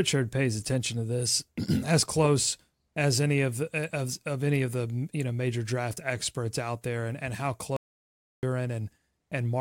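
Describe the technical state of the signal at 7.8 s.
At 7.8 s the speech is in an audio dropout to silence. Right after "there and and how", the signal falls to silence from 7.77 to 8.43 s. That is about 0.67 s with no room tone, likely from a lost input.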